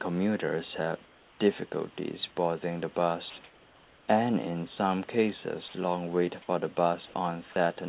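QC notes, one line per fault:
1.06–1.40 s, 3.44–4.08 s and 7.06–7.14 s: comfort noise in place of the background. Each pause's room noise, about 30 dB below the loudest parts, becomes a smooth, featureless hiss about 2 dB quieter (about 5 dB at 7.06 s), likely from discontinuous transmission with synthetic fill. On a spectrogram the textured background flattens into an even wash that stops at the 4 kHz ceiling of the call band; the waveform floor steps down slightly.
1.70–1.72 s, 3.30–3.36 s, 5.68–5.74 s and 7.52–7.56 s: sound dropped by the voice detector. Brief stretches of sound, about 10 to 60 ms each, are missing and filled with steady noise, likely because the detector read them as background. The waveform shows short flat-floor gaps, and the spectrogram shows abrupt vertical cuts.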